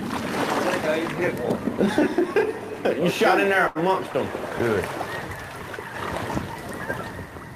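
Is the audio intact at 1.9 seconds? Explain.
Yes, at 1.9 seconds the audio plays through intact, with no dropout, click, distortion or other fault at that point.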